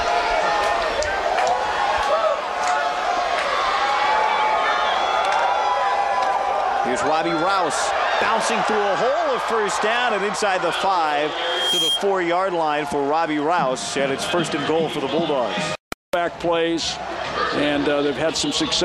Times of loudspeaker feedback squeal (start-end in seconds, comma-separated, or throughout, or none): 11.32-12.04